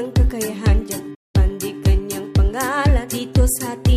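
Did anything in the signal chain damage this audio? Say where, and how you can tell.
Yes. The damage happened at the playback stage. A playback stall hits at 1.14 s. The sound cuts out mid-flow and stays silent for about 194 ms, then comes back at 1.36 s. The gap is a clean drop to nothing, with no fade and no fizz. That points to the output itself halting rather than the signal degrading. The likely cause is the player running dry of buffered data, or its audio thread being briefly blocked.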